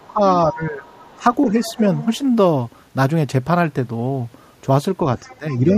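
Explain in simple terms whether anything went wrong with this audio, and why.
The echo canceller, the part that stops the far end's voice from returning through the loudspeaker and microphone, likely failed to remove all of it. That is the other side's voice leaking through: a faint scrap at 0.0 s, a clearer stretch from 0.86 to 2.18 s, and more from 5.18 to 5.74 s.

When both people talked at once, the same system likely couldn't separate the talker from the echo and turned everything down. This is speech suppressed in double talk. The voice dips and fades in pieces between 0.08 and 1.78 s, for less than a second in total, and again, more deeply, from 5.26 to 5.75 s.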